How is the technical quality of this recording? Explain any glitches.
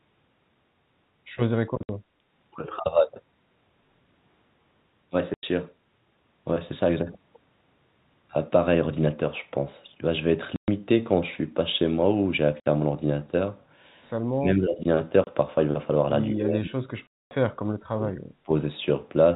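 The recording has two kinds of fault: repeated dropouts from packet loss filled with silence, and stretches where the speech is pulled down, likely by double-talk suppression. The telephone-band sound, with nothing above 4 kHz, is consistent with G.711 A-law coding.

Packet loss filled with silence occurs six times: 1.83–1.89 s (60 ms), 5.34–5.43 s (90 ms), 10.56–10.68 s (120 ms), 12.60–12.66 s (60 ms), 15.24–15.27 s (30 ms) and 17.07–17.31 s (240 ms). Every gap is a multiple of 30 ms, which points to 30 ms packets. When packets fail to arrive, the receiver inserts digital silence instead of concealing the loss. The speech therefore drops out abruptly, with hard edges. The longest hole, at 17.07 s, falls inside a suppressed stretch.

Speech suppressed in double talk affects 14.32–14.84 s, 16.33–18.16 s and 18.44–18.52 s. The speech level falls by up to around 35 dB in the first two spans and around 20 dB in the brief last one. 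Across the long middle span, roughly one and a half seconds of it sound ducked or broken. The likely cause is an echo canceller that could not separate the near talker from the far-end echo while both were active, so it attenuated everything.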